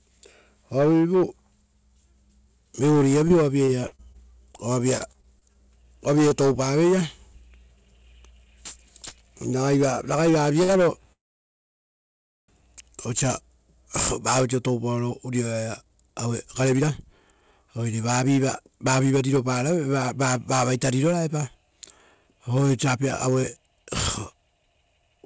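From 3.28 to 5.57 s the speech turns choppy and robotic, with small pieces missing: repeated packet loss, twelve gaps up to 39 ms each, patched by extending the previous sound. At 6.29 s a brief smear passes, a short concealed packet loss where about 20 ms never arrived and was filled from the preceding audio. From 10.63 to 10.71 s a sound is held too long with a faint buzz, a short stall from a late packet that added 55 ms while nothing was lost. From 11.13 to 12.50 s the audio fades into about 1.3 s of silence, then resumes exactly where it stopped. This is a call audio freeze, likely caused by delayed packets emptying the jitter buffer. From 15.64 s to the end the speech runs hurried at 112% speed without any pitch change, a jitter buffer speed-up that trimmed pitch-period slices, about a second in total, to reduce delay. Throughout, the G.722 call path leaves nothing above 8 kHz.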